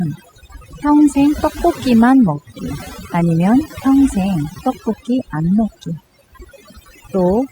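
Overdone noise removal runs throughout this speech recording: an overly aggressive reduction stage cuts frequency bands near its noise estimate, leaving twinkling near-silence and taking quiet parts of the voice with it.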